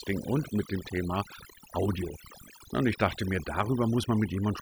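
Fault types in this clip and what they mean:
Overdone noise removal: A noise reducer was pushed too hard on this speech, from start to finish. It treats any frequency band close to its noise estimate as unwanted and pulls it down or out entirely. Softer parts of the voice sit near that estimate, so they vanish too. The pauses drop to near silence, dotted with twinkling specks.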